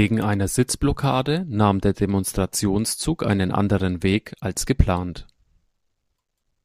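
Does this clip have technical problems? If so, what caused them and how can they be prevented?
No, nothing here calls for a fix.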